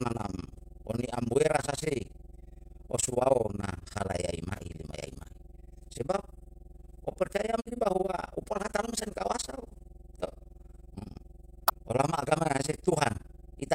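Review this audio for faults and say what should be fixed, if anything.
Mains hum runs through the whole recording. It is a steady low tone at 50 Hz, sitting about 20 dB below the speech. The power line is leaking into the signal, through a ground loop or a nearby transformer. Prevention: break the ground loop with proper grounding or an isolation transformer, and keep cables away from power supplies.

Overlap-add ripple is also present throughout. The level swings up and down around 20 times a second. The swings are very deep, about 60 dB. This gives the speech a rough tremolo. The audio was split into windowed frames and rebuilt with an overlap whose windows do not add up to a constant gain. Each frame boundary therefore dips and recovers. Prevention: use a window and hop size that satisfy the constant-overlap-add condition when resynthesising.

Damaged data in a compressed stream causes two short glitches. 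The first is from 7.62 to 7.67 s. The second is from 11.65 to 11.72 s. Each is a brief chirp, squawk, click or short hole. Part of the compressed data there was corrupted. The decoder misread those frames, lost sync and skipped ahead to the next valid frame header. Prevention: transfer and store the stream with checksums or error correction, and re-fetch any corrupted segments.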